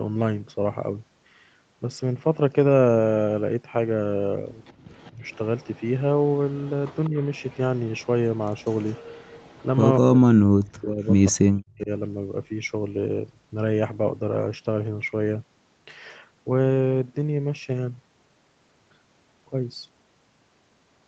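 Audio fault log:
4.65–5.88 s, 6.5–8.06 s, 8.57–9.66 s, 11.03–11.1 s, echo leak: a faint copy of the sound trails the original by 196 ms. It sits roughly 35 dB down in the first two stretches, nearer 25 dB down at 8.57 s and about 40 dB down at 11.03 s. The likely cause is a loudspeaker on the far end whose echo canceller let part of its own playback back into the microphone.
4.74–4.84 s, background gated by the echo canceller: the room sound dips by about 17 dB for roughly a tenth of a second, then returns. The canceller clamped the microphone hard while the loudspeaker was playing and released it once playback eased.
5.12–5.23 s, 7.1–7.15 s, 9.99–11.9 s, speech suppressed in double talk: the talker sinks by roughly 10 dB in the two brief dips, then by roughly 40 dB across about one and a half seconds. This is likely the canceller failing to separate the talker from the overlapping loudspeaker echo and turning both down.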